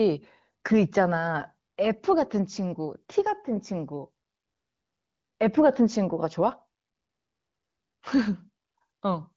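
No faults heard: the speech is band-limited to 7.2 kHz, consistent with the AMR wideband (HD Voice) codec running at a higher rate, with faint coding texture pointing to roughly 18 kbit/s.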